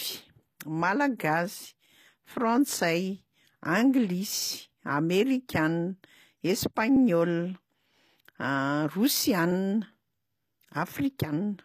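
Throughout the speech the treble sounds plainly audibly coded. Nothing is present above 14.9 kHz, and the upper band lacks the detail of the lower range, as if it had been reconstructed rather than carried through. This is likely HE-AAC compression, which points to a low bitrate near 24 kbps. The encoder keeps only the lower spectrum and fills the treble by spectral band replication, copying lower bands upward under a coarse envelope, so harmonics above the crossover do not line up with those below.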